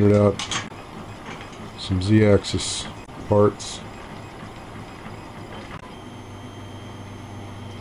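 Damaged data in a compressed stream corrupts the frames at 0.67 to 0.71 s, 3.04 to 3.09 s and 5.77 to 5.83 s. Each time the decoder misreads them and loses sync while hunting for the next frame header, producing a short chirp, squawk, click or hole that breaks through the sound.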